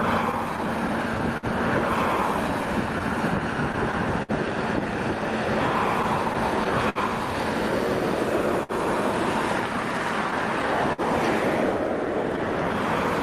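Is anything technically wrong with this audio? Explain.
Yes, there's a cluster of timing trouble through the whole clip, all of it buffer-related rather than anything lost outright.

Clock drift between sender and receiver runs the entire length. The sending side's clock seems to be running about 3 percent slow, so the receiver's buffer keeps draining and it has to stretch or repeat little slivers of sound. You get small, irregular timing hiccups scattered everywhere.

Repeated stalls (stutter) show up in three stretches: 0.31 to 1.46 s (five stalls, about 91 ms of fill, longest 53 ms), 6.03 to 6.98 s (four, 87 ms, longest 59 ms) and 10.31 to 11.01 s (three, 72 ms, longest 53 ms). Packets kept arriving late, the buffer ran dry, and the receiver held the last sound each time. So nothing's actually missing, but those passages drag and stutter.

Scattered short gaps hit 2.99 to 4.32 s, roughly five of them adding up to around a tenth of a second, the biggest around 50 ms. 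A lighter patch at 12.36 to 13.01 s has roughly three tiny ones. Each hole got patched by carrying the previous sound forward, so you hear brief ticks and smears.

There's also a short stall from a late packet at 8.63 to 8.72 s. A packet missed its slot, the buffer emptied, and the receiver stretched the last sound for 57 ms before picking up where it left off. It comes across as a held moment with a slight buzz or dip.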